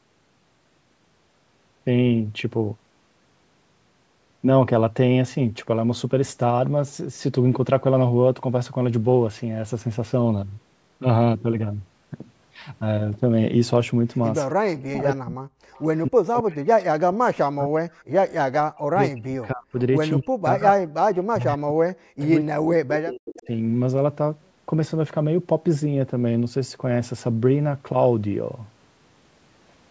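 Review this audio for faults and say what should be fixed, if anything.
Speech suppressed in double talk, 14.54 to 17.93 s and 18.58 to 23.49 s: the speech dips sharply, by up to about 40 dB, for roughly 3 s and then 4 s in total. Both sides were talking at once, and the echo canceller likely could not separate its own talker from loudspeaker echo, so it turned both down. To prevent this, tune the canceller's double-talk detection so it keeps the near-end talker rather than suppressing everything, and encourage headset use.

Echo leak at 15.72 to 15.99 s, 17.93 to 18.03 s, 22.21 to 22.25 s and 23.35 to 23.47 s: brief, faint copies of the speech return 265 ms late, about 25 to 35 dB below the direct sound. They are likely loudspeaker pickup that the other side's echo canceller left unremoved and sent back. To prevent this, have that side use a headset or lower its speaker volume so its canceller converges fully.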